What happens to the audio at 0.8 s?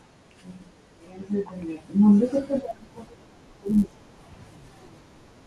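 Nothing goes wrong at 0.8 s; the speech there plays through intact, with no dropout, click or distortion.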